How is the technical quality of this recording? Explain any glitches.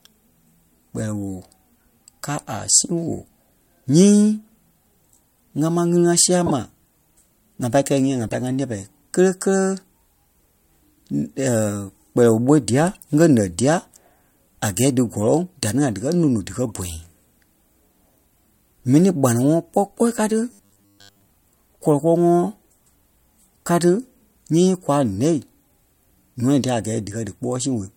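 The speech recording is marred by two kinds of fault: four short decoding glitches and one stretch of mechanical buzzing.

Corrupt frames were decoded at 6.46–6.52 s, 8.22–8.35 s, 12.94–12.98 s and 16.7 s. Damaged bits made the decoder misplace energy across a few frames each, giving brief chirps and noise bursts. Unlike a dropout, the sound is replaced by wrong content rather than silence.

From 20.51 to 21.25 s the speech turns into a rigid, metallic buzz at 100 Hz, which fits a 10 ms buffer being replayed. Audio was likely arriving too seldom, so most of it was skipped. The steady pitch, rather than random noise, separates this from frame corruption.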